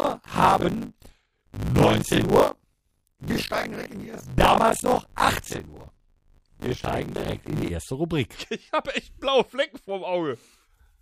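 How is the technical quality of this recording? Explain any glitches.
The technical quality is poor for the first stretch, because of buffer tearing. From the start to about 7.71 s there's a steady robotic buzz at 50 Hz, which points to a playback buffer period of around 20 ms. The app writing the ring buffer and the hardware reading it have drifted out of step, so they cross mid-period. About half of each chunk is stale audio from roughly 40 ms earlier, joined with hard edges on both sides. That splice repeating 50 times a second is the rattle, and it tracks the signal rather than sitting underneath it.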